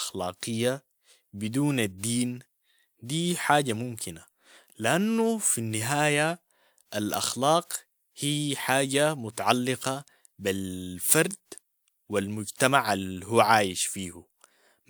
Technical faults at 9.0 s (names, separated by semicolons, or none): none